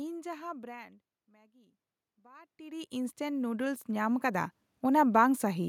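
From 1.48 s to 5.19 s there is automatic gain rising. After the input fell by about 24 dB, the gain control slowly lifted its gain by about 13 dB. Unlike a talker moving closer, the room noise swells upward along with the speech.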